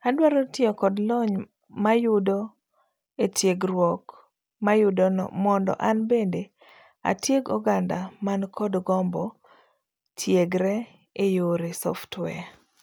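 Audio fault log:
No technical faults can be heard anywhere in the speech recording; the signal stays continuous and steady throughout.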